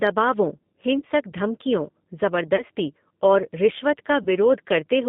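Throughout, the speech sounds slightly rough and synthetic, held between about 150 Hz and 3.6 kHz. This is the G.729 codec, plainly audible here, rebuilding each 10 ms frame from a vocal tract filter, a pitch predictor and a few pulses, which fits an 8 kbit/s stream.

At 0.99 to 1.03 s, 2.56 to 2.63 s, and 4.23 to 4.27 s just after "और रिश्वत", the sound briefly smears into a buzzy tone or coloured noise that fades. This is VoIP packet loss concealed by the speech codec. Each gap covers about 30 ms of lost audio, pointing to a single missing packet, and the decoder stretched its last pitch and filter to fill it.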